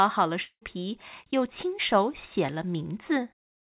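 From 0.42 to 0.63 s, a fading buzz and brief silence replace the speech, likely a long network dropout. The spectrogram shows smeared, decaying bands, and the waveform goes flat.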